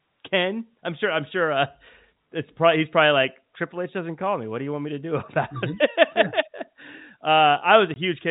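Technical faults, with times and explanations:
7.94–7.96 s: packet loss filled with silence. A 20 ms hole, consistent with one lost packet, has hard edges and shows as a flat waveform and blank spectrogram stripe.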